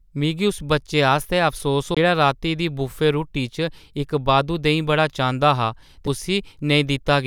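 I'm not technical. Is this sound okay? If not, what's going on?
No. There are two CD skips, which happen when the disc player's laser loses its place on the disc's spiral track, goes silent for an instant, and resumes from a different spot. The first falls at 1.95 to 1.97 s, between "उस बच्चे आस्तै अफसोस" and "राती दी बुफे रुट्टी", with a gap of about a fiftieth of a second. The second, at 6.07 s, is a tiny click lasting only a few thousandths of a second.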